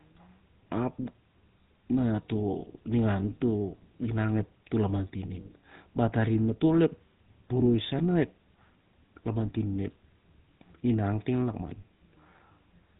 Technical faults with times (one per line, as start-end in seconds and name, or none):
0.00-13.00 GSM full-rate codec